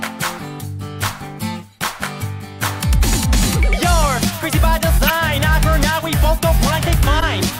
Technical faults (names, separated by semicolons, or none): corrupt frame decoded; repeated buffer